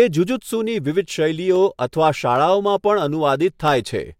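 Two sharp clicks cut through the speech, one at 1.56 s and another at 3.68 s. Each is a single brief tick, far too short to swallow any of the talking. They're most likely dropped samples: a tiny fraction of a millisecond of the stream goes missing, so the waveform leaps straight from one value to a later one instead of moving smoothly between them. That sudden step is what you hear as the click.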